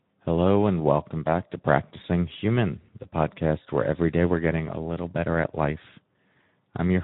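Throughout, Speex codec damage is plainly audible: the speech sounds hoarse and noisy rather than swirly like MP3, which fits a low Speex setting around 11 kbps.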